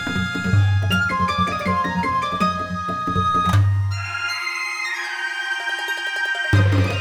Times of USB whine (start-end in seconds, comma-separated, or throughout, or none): none